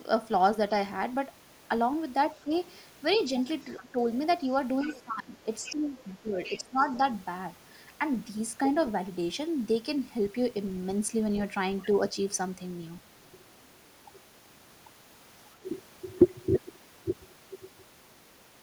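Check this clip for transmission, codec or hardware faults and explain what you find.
Two echo-control faults affect this speech, both clustered between about 2.4 and 7.2 s: the talker is suppressed during double talk, and the far end's voice leaks through.

Speech suppressed in double talk occurs at 2.44–2.51 s, 3.81–3.96 s and 4.85–6.78 s. When both sides talk at once, the echo canceller likely mistakes the talker for loudspeaker echo and attenuates everything. The first two dips are brief, shallow ducks. The last spans nearly two seconds, with about a second of gating as deep as roughly 20 dB. On a waveform the envelope pinches abruptly. A spectrogram shows the upper harmonics thinning or vanishing in blocks.

The other side's voice leaks through at 2.56–3.21 s, 3.77–4.32 s, 4.86–5.01 s and 5.64–7.17 s. The loudspeaker playback is likely reaching the microphone because the canceller did not remove all of it. 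It starts as a faint background murmur and grows more audible toward the last stretch. On a spectrogram it appears as a second, weaker set of harmonic traces that do not line up with the talker's, broken into patches.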